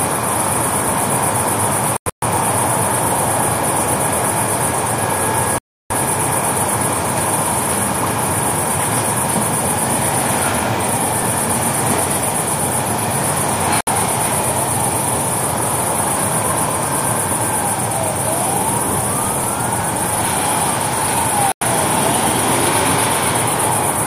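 Digital broadcast dropout breaks this sound recording at 1.97 s, 5.58 s, 13.81 s and 21.52 s. The receiver mutes whenever frames fail, leaving holes of 64 to 320 ms, which fits 32 ms frames. The first hole is broken into short gaps across about a quarter second.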